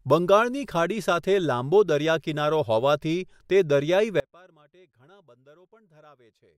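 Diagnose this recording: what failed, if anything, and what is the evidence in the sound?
From 4.2 s onward, speech abruptly sinks to faint sound about 30 dB down, an audio dropout to a faint residue, likely from broken analogue wiring.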